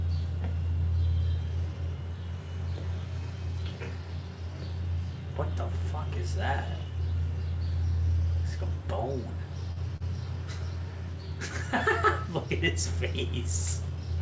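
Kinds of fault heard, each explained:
Short stall from a late packet: A packet arrived late and the jitter buffer ran empty. The receiver held the last sound until the packet came. This happens twice, at 9.72 s for 47 ms and 9.97 s for 39 ms. Nothing is lost.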